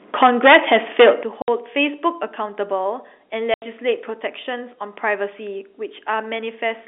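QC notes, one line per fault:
0.22 to 1.1 s, microphone overload: the loudest parts of the speech land about 11 dB past the converter's limit and have their peaks flattened, with around a tenth of the samples squared off. That produces a harsh crackle riding on the syllables. The likely cause is an input gain set too high for the converter. Unlike the narrow 300 Hz to 3.6 kHz telephone band, which stays the same throughout, this distortion comes and goes with loudness.
0.23 s, 1.23 s and 2.25 s, microphone volume stepped down: the whole signal, speech and background together, drops abruptly by about 4 dB, then about 11 dB, then about 2 dB, and stays at each new level. The first step lands just as the overload begins and the biggest follows its end, which fits call software likely reacting to the clipped input by cutting the device gain. The sound carries on unbroken at a lower level, with no gap, so these are level changes and not dropouts.
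1.42 to 1.48 s and 3.54 to 3.62 s, packet loss filled with silence: the speech cuts out entirely for 60 ms and then 80 ms, with hard edges where the waveform stops and restarts. The hole lengths are multiples of 20 ms, which points to three and then four lost 20 ms packets replaced with digital silence. Unlike the gain steps, the level is the same on both sides of each gap, and what is missing is the sound itself.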